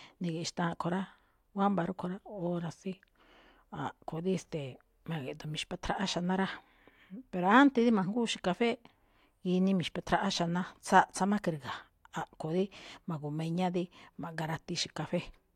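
No technical faults can be heard anywhere in the recording.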